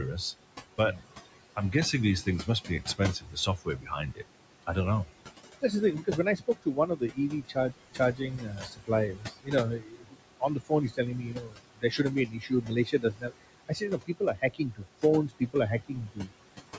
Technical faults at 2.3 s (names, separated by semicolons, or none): noise suppressor artifacts; speech cut by the noise suppressor